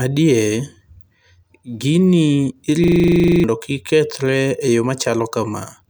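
From 2.84 to 3.44 s the speech hits a system hang loop. The computer stalled while the audio hardware kept replaying the same 40 ms stretch of its ring buffer, about 15 times, which fits a buffer holding roughly 40 ms of sound. Repeating at 25 Hz, the loop turns into a rough, rattling buzz instead of speech. Close to 0.7 s of real audio is lost, and normal playback resumes on "kik kethre e yo".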